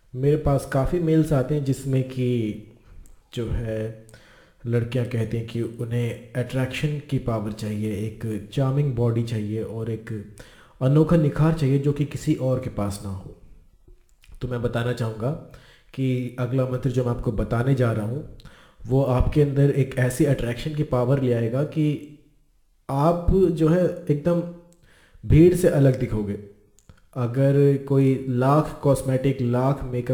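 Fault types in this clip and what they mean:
Crude rate conversion: A gritty, inharmonic fizz runs through the whole clip, riding on the louder and brighter parts of the sound, with buzzing tones that have no musical relation to the material and sit roughly 35 dB below it. The cause is a rate change made without filtering, consistent with 44.1 kHz raised to 48 kHz by simply repeating the nearest sample. That periodic stepping error repeats in a fixed pattern and produces the stray tones.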